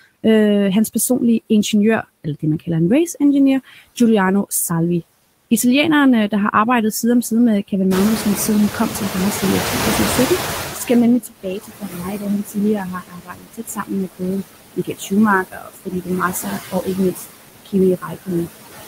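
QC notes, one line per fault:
throughout, noise suppressor artifacts: The background noise is pulled down by about 18 dB, but it does not sit still. It dips in the gaps and swells back under the speech. The suppressor decides frame by frame which frequency bands hold steady noise and attenuates them, so the residue shifts from moment to moment and some of the speech's own content goes with it.
7.9–11.09 s, noise suppressor catching up: Around 8 s the room noise jumps by about 18 dB, ending up only about 9 dB below the speech. At first it comes through with less reduction, then it gradually sinks over roughly 3.2 s until it is about 15 dB down. The suppressor's noise estimate was built on the quieter background before the rise, so it takes this long to adapt to the new level.
2.03–2.68 s, 11.21–17.26 s, 17.65–18.48 s, speech cut by the noise suppressor: Parts of the speech drop away as if swallowed and turn faint. 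In the first span this lasts only about a tenth of a second, with a drop of about 17 dB. The long stretch from 11.21 s loses around 4 s in total, with drops of up to about 22 dB. The last span loses under half a second, with drops of about 19 dB. The suppressor mistakes low-level speech energy for noise and turns it down along with the background.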